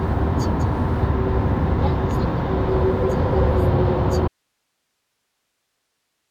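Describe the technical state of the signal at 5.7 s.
At 5.7 s the signal is inside an audio dropout to a faint residue, which begins abruptly at 4.28 s and lasts to the end of the clip. The wanted sound is lost while the path after the break stays live, most likely from a broken connection or source upstream. What remains is only hiss, sitting roughly 55 dB below the normal level, with a hard cut at the start rather than any pause or fade.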